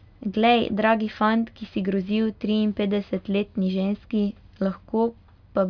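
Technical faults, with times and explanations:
No technical faults, with times or explanations, are found in this speech clip.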